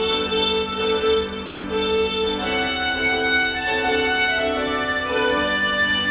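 Sound dropped by the voice detector, 1.46 to 1.64 s: for 180 ms the audio gives way to flat comfort noise, likely because the sender's detector misjudged that sound as background.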